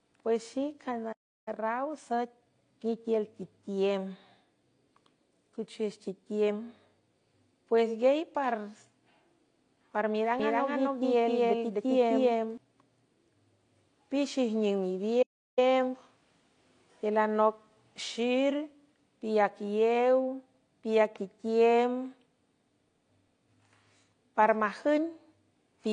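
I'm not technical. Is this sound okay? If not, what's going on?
No. The speech has several faults:

AAC compression, throughout: it sounds dull and fizzy, with nothing above 9.8 kHz, most likely from heavy squeezing into a small file.

Playback stall, at 1.12–1.48 s and 15.22–15.59 s: the sound cuts out for about a third of a second each time, likely because the player ran short of data.

Time-compressed catch-up, at 1.48–2.84 s and 15.59–16.27 s: the player hurries through the backlog at 1.25 and then 1.5 times normal speed, keeping the pitch.

Doubled audio track, from 10.39 to 12.57 s: a second copy, about as loud, trails roughly a third of a second behind, likely from the same audio being mixed in twice.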